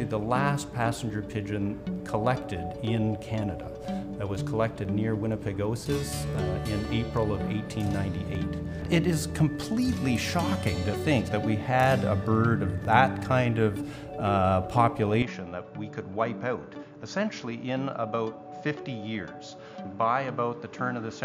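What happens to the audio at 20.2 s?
At 20.2 s the audio is inside an input switched to a poorer device, running from 15.22 s to the end. From that point it sounds duller and boxier and drops about 5 dB, with no gap at the change, likely because the recording moved to a narrower-band microphone or headset profile. On a spectrogram the energy stops abruptly at 7.1 kHz, and a new, faint noise floor appears. The waveform steps down slightly in height at 15.22 s.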